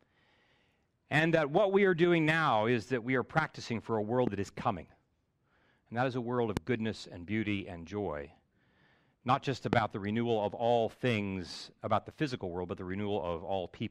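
Three loud pops cut into the speech: at 4.27–4.29 s, between "practicing for a world" and "that is coming"; at 6.57–6.59 s, after "that is a world" and before "goodness and beauty and"; and at 9.73–9.75 s, just before "the renewal of all". Each is a single sharp thump standing well above the speech, likely from a switch, static or driver glitch. The waveform shows a tall isolated spike, and the spectrogram shows a thin full-height vertical stripe.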